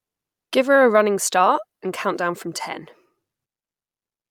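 Listening to the speech closely, nothing stood out as a technical fault at any point.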